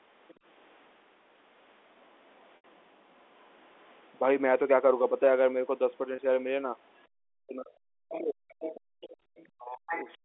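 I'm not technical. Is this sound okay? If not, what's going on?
No. Several things went wrong on this phone call.

Other side's voice leaking through: the talker's phone plays the person at the other end out loud, and the part meant to strip that sound back out of the microphone likely missed some of it. You hear a second, fainter voice in a brief scrap at 0.28 to 0.34 s, quietly from 2.04 to 3.85 s, and much more plainly from 6.99 to 10.17 s, where it nearly competes with the main talker.

Speech suppressed in double talk: when both people talk at once, that same echo-removing part likely can't tell the talker apart from the leaked voice, so it turns everything down. The main voice briefly dips at 0.35 to 0.41 s. From 7.45 to 10.09 s it repeatedly sinks or drops out, totalling about a second and a half of weakened or missing voice.

Packet loss with pitch repetition: small chunks of audio never arrived, and the receiving phone filled each hole by repeating the last fragment of voice and fading it out. 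At 2.56 to 2.64 s an 80 ms gap makes the voice hang on a buzzy, stretched sound before fading and coming back. At 6.16 s a 20 ms gap gives only a tiny held blip.

Background gated by the echo canceller: while the loudspeaker was playing, the system clamped the microphone almost shut. The room's background sound suddenly vanishes for about a tenth of a second at 7.08 to 7.17 s, and again for roughly a third of a second between 8.8 and 9.26 s, then snaps back when the clamp releases.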